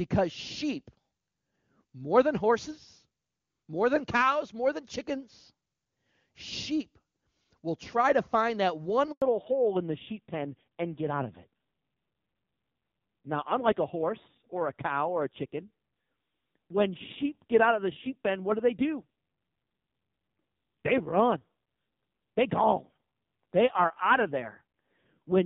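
At 9.12 s the call was handed between networks and no speech frames arrived for 100 ms. This handover gap makes the voice die away within a few tens of milliseconds, leaving silence until 9.22 s. From 9.22 s to the end, the call dropped from HD Voice to an older codec. This fallback to narrowband strips everything above 4 kHz, leaving the speech duller and rougher, with a rasp that fits a low rate near 5.9 kbit/s.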